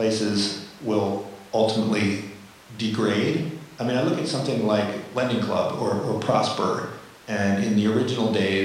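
No technical faults can be heard anywhere in the recording. There is nothing to place on a timeline.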